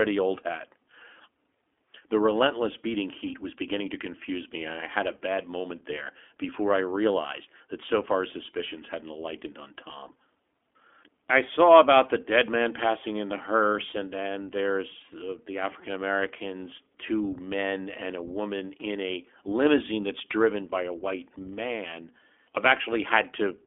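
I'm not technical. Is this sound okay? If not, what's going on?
No. From start to finish, this speech has passed through the iLBC codec, a system built for internet phone calls. It keeps only a narrow, telephone-like band of sound, roughly 250 Hz to 3.4 kHz, with nothing above 3.6 kHz, so voices sound thin and boxed-in. It also handles the sound in separate 20 ms slices, each coded on its own, and the speech sounds plainly rough and synthetic throughout.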